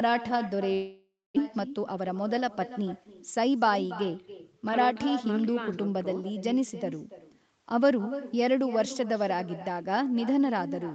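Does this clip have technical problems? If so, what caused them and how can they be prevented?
Yes, there are two problems in this speech.

The first is echo with no canceller, present throughout. Every phrase is followed by a fainter copy roughly a third of a second later. The copy sits about 14 dB below the direct speech and sounds thinner. The far end is playing the call through a loudspeaker, and its microphone sends that sound back over the network. To prevent it, enable acoustic echo cancellation at the far end or have that person use headphones.

The second is a gap from 0.73 to 1.44 s, likely a long network dropout. About 0.6 s of audio never arrived. The receiver stretched the last sound into a fading buzz or hiss for a while, then left about 0.23 s of near silence. The speech resumes afterwards with the lost part simply missing. To prevent it, use a more stable connection, such as wired rather than congested Wi-Fi, and enable forward error correction if packet loss continues.

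The lack of content above 8 kHz comes from the call's normal bandwidth limit and is not a fault.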